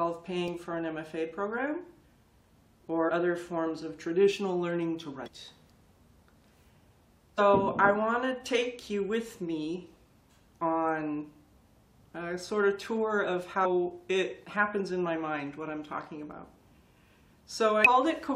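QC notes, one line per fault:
3.08–3.10 s, 5.26–5.28 s, 7.37 s, 13.64 s, 17.85–17.87 s: damaged data in a compressed stream. Brief glitches as corrupt frames are misread, and the decoder loses sync and searches for the next frame header.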